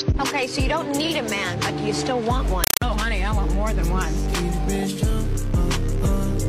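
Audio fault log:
2.64–2.82 s, compressed stream played as audio. Very loud, chattering static replaces the sound. Noise bursts of about 5.3 ms repeat 31.25 times a second, with silent gaps between. This points to an undecoded Dolby Digital stream being played as ordinary samples.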